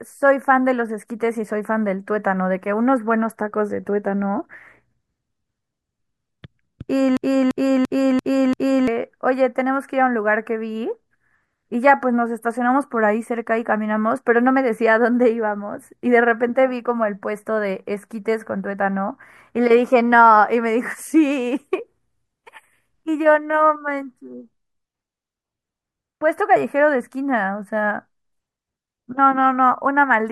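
From 7.17 to 8.88 s the speech becomes a system hang loop. A frozen driver let the hardware replay one 341 ms buffer five times. It stutters at 2.9 Hz, and about one and a half seconds of audio are lost.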